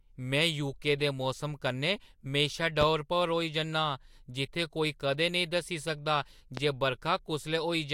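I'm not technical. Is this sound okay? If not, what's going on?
No. There are two loud pops, sharp thumps over the speech at 2.81 to 2.85 s and at 6.57 to 6.61 s, right after "दस्सी सकदा", likely from a brief electrical jolt.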